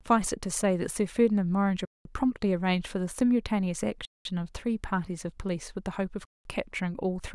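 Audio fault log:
1.85–2.05 s, 4.05–4.25 s, 6.25–6.45 s, gap between chunks: 200 ms silent holes recur every 2.2 s, as silence is left at each join between 2-second chunks and nothing is lost.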